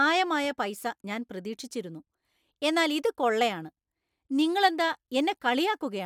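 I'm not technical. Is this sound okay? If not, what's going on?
Yes, this sound is fine.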